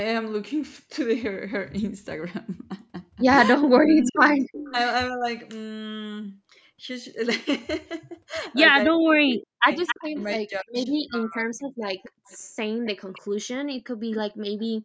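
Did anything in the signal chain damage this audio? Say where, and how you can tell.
Yes. From 3.54 to 5.26 s and again from 8.87 to 11.56 s the speech sinks and breaks into pieces, dropping by about 40 dB at its deepest, for roughly a second in the first stretch and two seconds in the second. This is speech suppressed in double talk at the call-processing stage. The echo canceller likely heard both ends active at once, couldn't separate this talker from loudspeaker echo, and attenuated everything.

A fainter, delayed copy of the speech trails the original at 4.02 to 4.72 s (295 ms behind, about 10 dB down), 9.86 to 10.24 s (267 ms, about 10 dB down), 12.03 to 13.2 s (267 ms, about 20 dB down) and 13.8 to 14.65 s (267 ms, about 30 dB down). That is echo leak, likely from a far-end loudspeaker whose canceller left residual pickup that was sent back up the call path.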